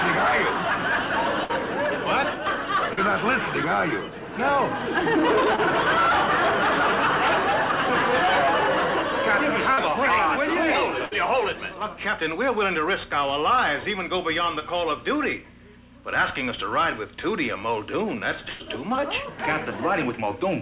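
At 1.44 to 1.51 s comes the first burst of packet loss. About 60 ms of audio never arrived in time, and the receiver filled a 51 ms gap by continuing the last sound while turning it down. The result is a held buzz or a fading hiss, depending on what came before, and then the audio picks up further along. The same happens at 11.05 to 11.13 s, with 60 ms missing and 62 ms filled.

Short concealed packet loss sits at 2.93 to 2.99 s, 5.56 to 5.60 s and 9.74 to 9.79 s. Here only a few hundredths of a second were lost, 20 to 40 ms each, and the receiver extended the last sound and blended straight back into the real audio. That gives a brief smear or wobble rather than a held, decaying tail, and it is also where a short sound can drop out. Another instance follows at 14.59 to 14.63 s, with 20 ms missing and 17 ms filled.

The longest burst of packet loss runs from 18.49 to 18.62 s. About 100 ms is gone and 105 ms is filled, with no silence. 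Its concealed tail is longer than in the other two bursts, which is what separates these bursts from the quick smears of the short losses.

Throughout, nothing above 4 kHz is present. That fits a narrowband call path using G.711 mu-law.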